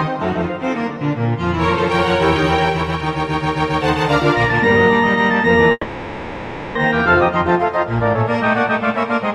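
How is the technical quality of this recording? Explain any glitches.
The recording has one clear glitch, a long network dropout. It runs from 5.71 to 6.78 s. The sound stops moving forward there. The last moment before the gap is drawn out into a buzzy or hissy tail that fades over about 1.04 s. A short silence of about 30 ms follows. The audio then resumes, but that stretch of material is gone. The likely cause is a break in the incoming stream. With no new data, the receiver extended the last sound until it ran dry.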